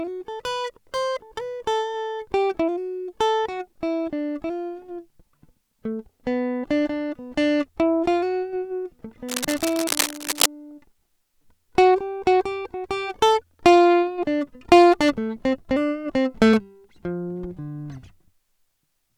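Cable scratch noise, 9.28 to 10.46 s: dense, uneven scratching almost as loud as the music, likely a worn connector's contact resistance jumping about.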